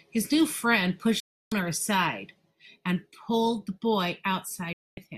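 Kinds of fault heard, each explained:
Digital broadcast dropout: the receiver mutes on lost or corrupt frames, so the speech cuts abruptly to silence twice, for 0.31 s and 0.24 s, losing that content.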